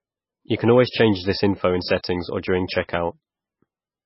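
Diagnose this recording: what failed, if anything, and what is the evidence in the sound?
Watery speech throughout, nothing above 5.6 kHz: likely heavy MP3 compression at the codec stage, the starved encoder cutting treble and dropping weak lines, fitting roughly 15 kbps.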